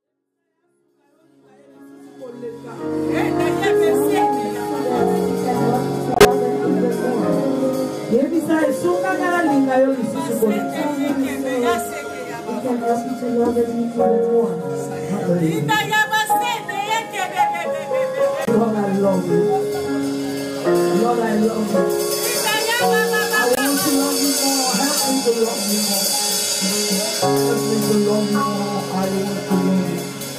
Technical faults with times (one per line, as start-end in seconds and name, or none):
6.14-6.25 corrupt frame muted
18.45-18.49 corrupt frame muted
23.55-23.58 corrupt frame muted